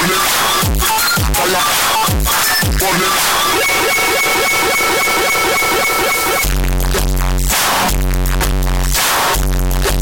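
The whole recording, about 10 seconds, is hit by a float read as integer fault. The audio is extremely loud and harsh from start to finish. The waveform is pushed into a near-square shape sitting at an almost fixed, high level. Quiet passages and background noise come out as loud as everything else. This points to samples stored as 32-bit floating point being read as 32-bit integers. That is the likely cause. The sign and exponent bits then set the level, not the real amplitude.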